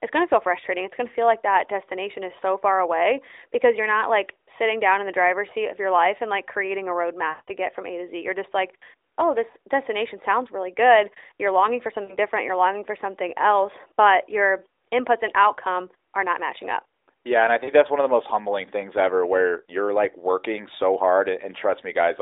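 At 7.30 s, right after "and like creating a", lost AMR speech frames stretch the sound into a smeared, fading drone for about 180 ms before "get from" returns weakly, which fits a run of roughly nine missing 20 ms frames. Shorter 40 ms losses at 12.04 s, after "longing for", and at 17.64 s, before "that's one of the", give brief warbling dips. Unlike a plain dropout, the gap is filled with decaying, repeated speech-like sound rather than silence.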